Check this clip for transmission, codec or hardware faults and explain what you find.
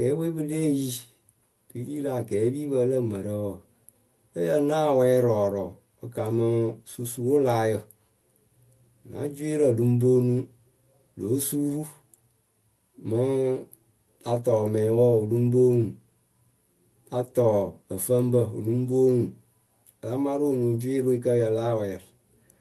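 No transmission, codec or hardware faults are audible in the speech; it carries the normal character of a call path, with the top end rolled off in a way that fits Opus running at a 12 kHz audio bandwidth.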